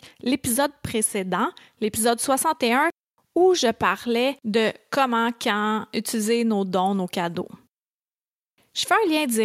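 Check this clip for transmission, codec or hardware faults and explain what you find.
Nothing turns up here: the speech comes through without a single dropout, glitch or defect to point to.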